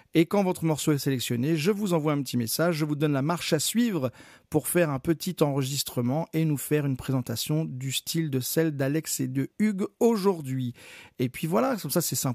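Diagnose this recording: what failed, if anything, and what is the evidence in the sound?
Nothing failed anywhere here.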